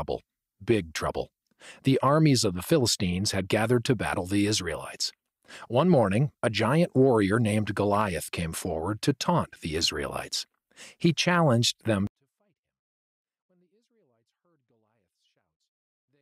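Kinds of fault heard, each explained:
24-bit alignment error (too quiet): 24-bit samples packed into the low bytes of a 32-bit word are being read as full 32-bit integers, so every value sits 256 times below where it belongs. From 12.07 s to the end of the clip, the speech stays clean and undistorted but falls by about 48 dB in a single step, leaving it barely audible and easy to mistake for silence.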